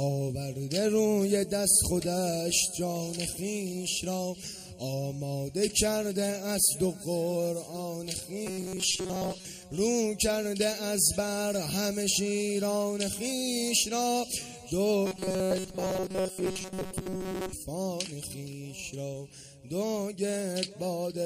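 From 8.47 to 9.46 s and 15.06 to 17.53 s, robotic sound from repeated short buffers, likely from looping a short chunk, forces a rigid 188 Hz metallic buzz unlike pitch-preserving dropouts.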